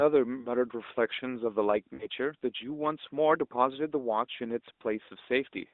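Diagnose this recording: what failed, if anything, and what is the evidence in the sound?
Network side, then: from 1.94 to 2.08 s the speech smears and fades over about 60 ms, which fits three 20 ms frames in a row failing their check. That's lost AMR speech frames. The AMR-NB decoder stretched the last good pitch and tract settings while ramping the gain down.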